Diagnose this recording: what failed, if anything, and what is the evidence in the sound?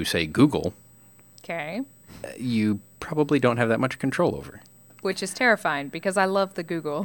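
USB whine sits under the speech for the whole clip, a fixed-pitch tone at 8 kHz with its strongest component at 16 kHz, roughly 30 dB below the speech. The 125-microsecond USB microframe current is leaking in through shared power or ground in the analogue wiring. A spectrogram shows steady horizontal lines at 8 and 16 kHz.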